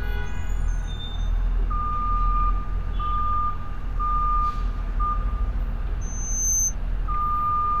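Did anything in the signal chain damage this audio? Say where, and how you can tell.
Yes. Loudspeaker feedback squeal occurs in the acoustic loop between speaker and microphone, 6.01 to 6.75 s. A pure tone near 6.2 kHz swells over about half a second to roughly the level of the sound itself. At that frequency, loop gain exceeded unity and regenerated.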